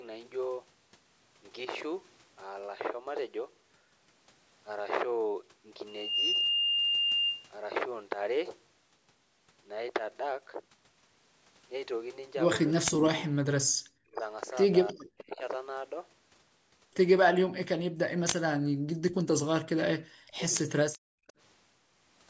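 From 12.73 to 15.41 s, the speech drops out in pieces, totalling about a second, with the deepest dips near 40 dB. This is speech suppressed in double talk: the likely cause is an echo canceller that could not tell the near talker from loudspeaker echo while both sides spoke, so it pulled everything down. On a waveform the envelope caves in abruptly mid-phrase. On a spectrogram, vertical bands go dark across the whole band up to the 8 kHz ceiling.

Inside that stretch, at 12.93 to 13.08 s, a short echo leak appears. It is a copy of the speech arriving 322 ms late, nearly as loud as the original, likely because an echo canceller let part of its loudspeaker pickup back through. On the spectrogram the harmonic pattern reappears, shifted a third of a second to the right.

At 13.72 to 13.82 s, the background is gated by the echo canceller. The room sound falls by about 32 dB for roughly 100 ms and then returns, a brief hole in the ambience. 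The waveform's noise floor collapses to near-flat, and the spectrogram shows a thin dark gap in the low-level haze.

Fainter echo leaks at the same 322 ms delay follow at 14.87 to 15.22 s, well below the speech, and at 21.28 s as a barely audible trace. A longer double-talk suppression runs from 17.32 to 21.24 s, cutting out about 3 s in total, again dipping by around 40 dB.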